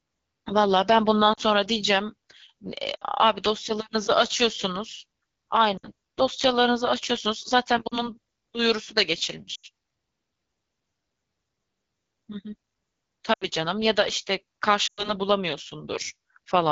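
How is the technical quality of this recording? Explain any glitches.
The technical quality is poor. The speech is coded through a low-rate wideband phone codec the whole way through, and it breaks up in seven places where speech frames were lost.

The AMR wideband (HD Voice) codec runs throughout. The voice sounds rough and raspy, which fits one of AMR-WB's lowest modes, around 8.85 kbit/s. At that rate the pulse-driven vocal tract model has too few bits to track the voice accurately. On a spectrogram, the harmonics below 6.4 kHz look smeared and noisy. The 6.4 to 7 kHz band shows a shaped noise texture, and nothing appears above 7 kHz.

Lost AMR speech frames cause short breaks at 1.33–1.40, 2.96–3.04, 5.77–5.88, 7.87–8.09, 9.55–9.66, 13.33–13.47 and 14.87–15.14 s. Each gap lasts roughly 40 to 100 ms, consistent with two to five consecutive 20 ms frames failing. The decoder covers each gap by repeating the last good pitch and vocal tract settings at falling gain. 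You hear a brief warble that sinks to near silence within two frames, then a weak, rough restart. In the waveform, the envelope decays quickly inside each gap. On a spectrogram, the harmonics freeze flat and then fade.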